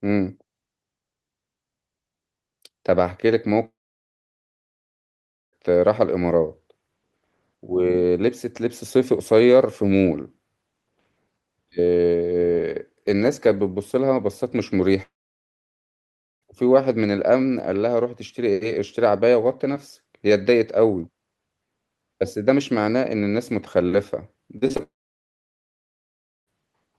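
A speech clip. At 3.65–5.55 s, 15.03–16.44 s and 24.83–26.49 s, sound stops, leaving brief fading fill, then silence lasting 1.3–1.8 s. These are likely long network dropouts. At 24.58–24.81 s, repeated packet loss makes the sound choppy and robotic, with four short gaps patched.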